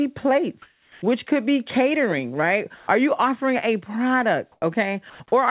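From 0.62 to 1.02 s the real background gives way to a flat, featureless hiss about 3 dB quieter. It happens again from 4.52 to 4.62 s, this time at the same level. That's comfort noise in place of the background, likely the sender pausing transmission during a gap while the receiver fills it with synthetic noise.

From 2.76 to 2.88 s, about 90 ms of actual sound vanishes into steady noise. From 5.1 to 5.2 s, a full 100 ms gets swapped out the same way. That's sound dropped by the voice detector, which likely mistook the sound for background and cut it off. Everything sits in a band with nothing above 4 kHz, which fits a G.711 call path.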